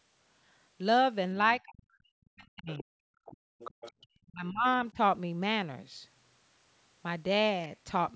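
Speech suppressed in double talk begins at 1.65 s and runs to 3.11 s. For around a second of that span the speech sinks by as much as roughly 40 dB. The likely cause is the echo canceller failing to tell the talker apart from loudspeaker echo while both sides spoke, so it turned everything down. Inside that stretch, at 2.70 to 2.83 s, the other side's voice leaks through, a faint second voice some 20 dB below the speech. It returns at 3.25 to 3.37 s, weaker at around 25 dB down. The microphone likely picked up the far end from the loudspeaker and the canceller did not fully remove it.

Background gated by the echo canceller follows at 3.39 to 3.59 s. The room sound drops by about 38 dB for 200 ms and then comes back. While the loudspeaker was playing, the canceller clamped the microphone hard and then released it.

The other side's voice leaks through again from 3.59 to 4.07 s, about 20 dB under the speech. 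During it, at 3.92 to 3.99 s, the background gates once more, dipping about 27 dB for 70 ms.

The speech suppression recurs at 4.27 to 4.66 s, dipping by as much as roughly 35 dB over about 300 ms. A shallower dip of roughly 10 dB follows at 4.91 to 4.98 s. Both mark moments where the talker and the far end overlapped. Throughout, the band stops at 8 kHz, as the call's microphone processing shapes it.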